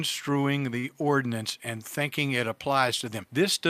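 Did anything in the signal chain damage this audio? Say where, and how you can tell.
Yes: a short stall from a late packet between about 0.79 and 0.98 s, at the network stage where the receiver's jitter buffer meets the incoming stream. A packet arrived late, the buffer ran dry, and the receiver filled the gap by stretching the preceding sound for about 40 ms. You hear a held sustain with a slight buzz or dip rather than a dropout. Nothing is lost; the audio resumes where it left off, now about 40 ms later.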